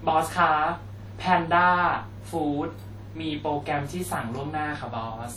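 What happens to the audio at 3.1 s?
At 3.1 s, as throughout, the speech sounds washy and ringing, with hiss that breathes with the voice. The likely cause is WMA compression smearing quantisation noise across tens of milliseconds and dropping weak components, damage that fits a bitrate around 48 kbps.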